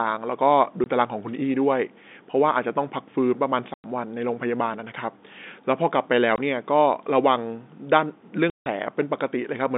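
There's packet loss filled with silence: hard dropouts at 0.84–0.86, 3.74–3.84, 6.36–6.38 and 8.5–8.66 s, each with hard edges. The gaps come in 20 ms steps, which fits 20 ms packets going missing under the band-limited telephone sound.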